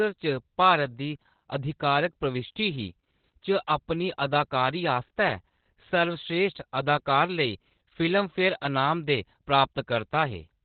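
Throughout the speech, Opus voice compression is working at a very low rate that points to about 8 kbps, using its narrowband SILK coder. Nothing above 4.5 kHz survives, so the voice sounds muffled, while coarse excitation coding leaves it hoarse and slightly robotic.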